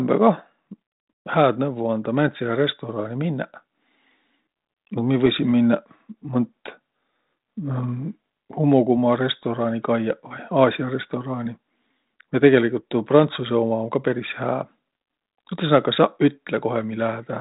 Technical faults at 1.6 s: none

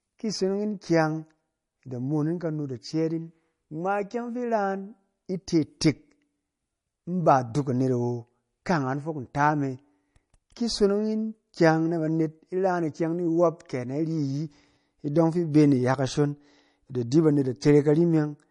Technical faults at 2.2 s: MP3 compression

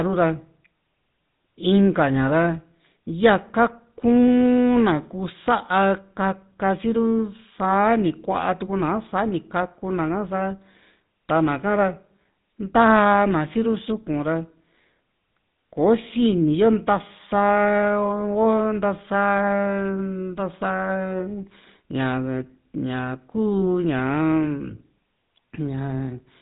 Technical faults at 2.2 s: GSM full-rate codec

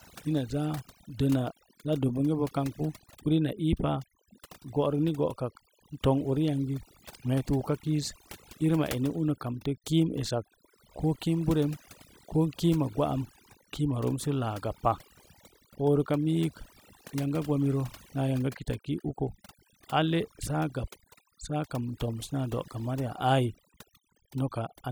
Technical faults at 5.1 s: overdone noise removal

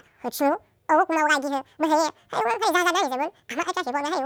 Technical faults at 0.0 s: audio read two samples at a time (double speed)

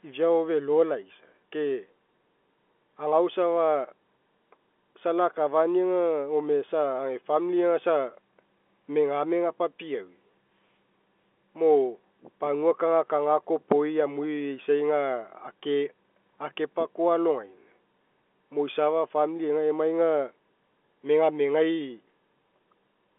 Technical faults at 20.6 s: none

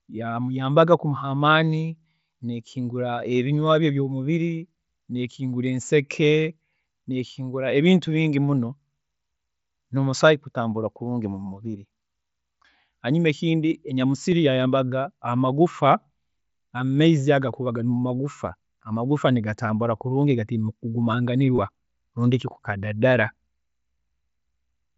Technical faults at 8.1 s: concealed Bluetooth headset packet loss

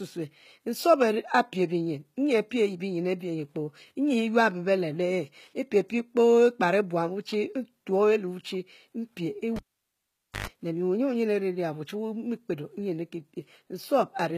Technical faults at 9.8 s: HE-AAC compression; cable pulled and plugged in

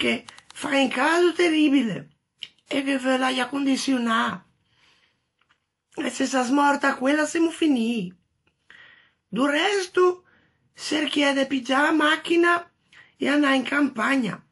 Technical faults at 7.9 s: transcoding between lossy codecs

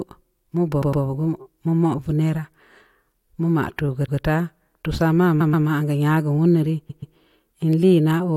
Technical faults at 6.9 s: repeated frames

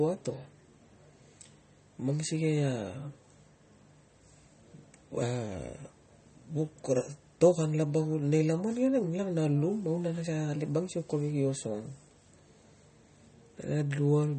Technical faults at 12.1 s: MP3 compression

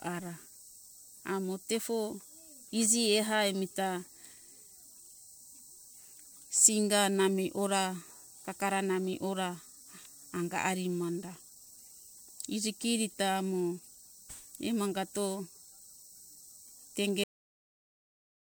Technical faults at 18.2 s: cut-off end

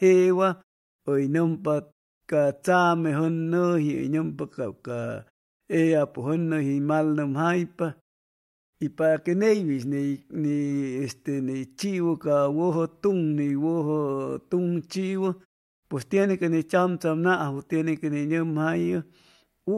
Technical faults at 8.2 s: none

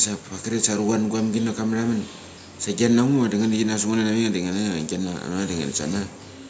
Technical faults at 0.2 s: none

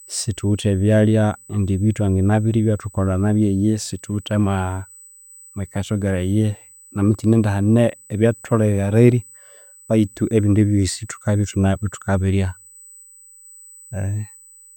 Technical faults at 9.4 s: USB whine

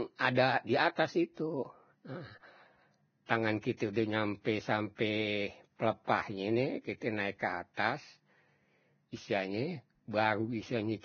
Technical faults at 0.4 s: Vorbis compression; pre-echo

